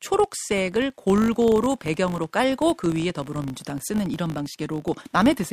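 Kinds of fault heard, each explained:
Filter restarted on every block: the filter's stored state is discarded at each block boundary, so every block starts from rest with a small transient. Throughout this speech the result is a steady 50 Hz buzz, pointing to 20 ms blocks, that rises and falls with level.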